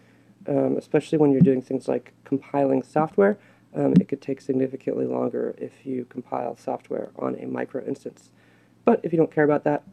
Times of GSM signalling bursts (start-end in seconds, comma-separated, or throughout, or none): none